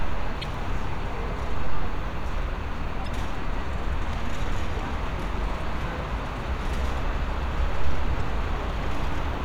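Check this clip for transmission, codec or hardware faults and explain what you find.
Damaged data in a compressed stream occurs four times, each lasting about 40 ms: 0.40–0.44 s, 3.04–3.08 s, 5.58–5.62 s and 8.17–8.21 s. Corrupted bytes make the decoder misread frames and lose sync until it finds the next valid header, producing a short chirp or blip in the sound at each point.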